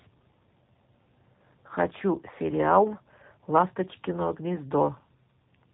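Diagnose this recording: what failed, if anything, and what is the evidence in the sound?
The fault is at the codec stage: the speech has been through the G.729 codec for the whole recording, and the damage is plainly audible. Everything is band-limited, with nothing above 4 kHz, so a spectrogram shows a hard ceiling there and an empty band above it. The speech sounds rough and synthetic because it has been rebuilt from a vocal-tract filter, a pitch predictor and a few pulses per 10 ms frame, which fits an 8 kbit/s stream.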